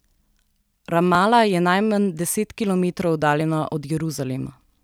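At 1.15 s, just before "je najmanj deset kilometrov", and at 3.41 s, after it, the speech jumps, likely a dropped buffer (overrun) losing around 10 and 20 ms. The waveform shows an abrupt discontinuity; the spectrogram, a thin vertical broadband line.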